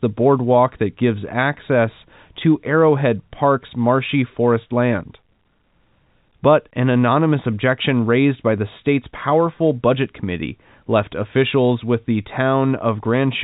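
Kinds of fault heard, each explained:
No faults can be heard in this speech clip. It comes through G.711 telephone coding, so the sound stops at 4 kHz and carries the faint level-following hiss of 8-bit logarithmic samples.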